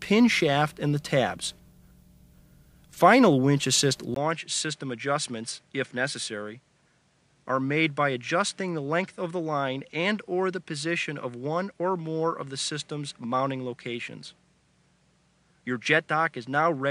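At 4.14 s a 20 ms gap opens. From there to the end, nothing sounds above 10.5 kHz, the level falls roughly 5 dB and a new noise floor appears. This is likely an input switched to a poorer device, since a plain filter would bring no new noise or gap.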